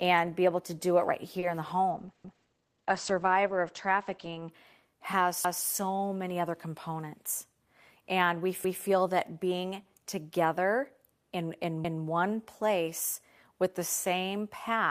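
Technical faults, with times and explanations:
1.39 to 1.45 s, short stall from a late packet: a packet arrived late and the jitter buffer ran dry just after "to do it right", so the receiver held the last sound for about 30 ms before resuming at "in the". Nothing is lost, but the sound briefly hangs.
1.94 to 4.56 s, call bitrate drop: after "in the", the encoder's rate fell from 32 to 10 kbps, staying at the minimum for about 2.3 s, and the bandwidth narrowed from 20 kHz to 8 kHz. Coarser coding leaves the speech rough and muffled until it recovers.
2.24, 5.44, 8.64 and 11.84 s, overlapping chunks: the audio was handled in 3-second chunks that each began 200 ms before the previous one ended. Every join replays a 200 ms piece as a stutter, the last between "being together in in" and "one place with the".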